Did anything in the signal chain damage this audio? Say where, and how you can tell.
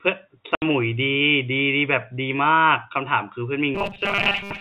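Yes. At the network stage there is packet loss filled with silence. From 0.55 to 0.62 s a 70 ms hole, which fits seven 10 ms packets, cuts the speech, with hard edges. Unlike a driver dropout, the gap's length is a whole number of packets.

From 3.75 to 4.61 s the speech turns into a rigid metallic buzz at 200 Hz that still roughly tracks the words. The likely cause is robotic sound from repeated short buffers: the driver or jitter buffer loops the last 5 ms while most of the real audio is skipped. Unlike codec distortion, the pitch stays fixed at 200 Hz.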